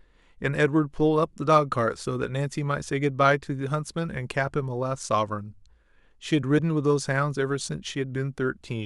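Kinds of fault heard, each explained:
Damaged data in a compressed stream: at 6.55 s the speech breaks into a brief glitch lasting about 56 ms, the sound of a decoder reading corrupted frames, losing sync and hunting for the next valid frame header before resuming. On a spectrogram it shows as a narrow vertical smear of broadband or oddly tonal energy unrelated to the surrounding speech harmonics; the waveform shows an abrupt discontinuity, with a short burst of mismatched samples where the signal jumps.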